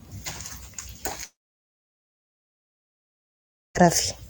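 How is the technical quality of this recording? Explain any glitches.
The recording has one serious glitch. From 1.23 s to 3.77 s there is a long network dropout, likely from the stream stopping for a long stretch. The last sound trails off as a fading buzz or hiss. Silence follows for about 2.4 s. The speech returns at 3.77 s, but the missing 2.5 s never comes back.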